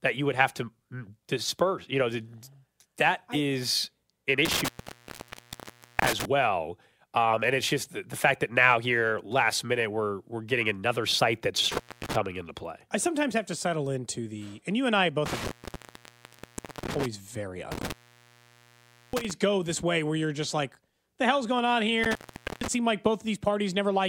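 Intermittent contact breaks the speech five times, at 4.45 to 6.25 s, 11.72 to 12.16 s, 15.26 to 17.06 s, 17.72 to 19.31 s and 22.04 to 22.68 s. Each time a loose cable or plug opens the signal path, leaving gaps of 1.34, 0.30, 1.37, 1.21 and 0.46 s, with crackle where contact breaks and returns. On the waveform the envelope collapses abruptly, with spiky edges. The spectrogram shows the harmonic bands vanishing, framed by broadband vertical clicks.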